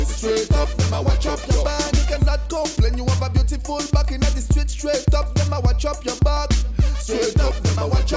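No technical fault can be heard anywhere in the audio. No moment in it calls for a timestamp or an explanation of what went wrong.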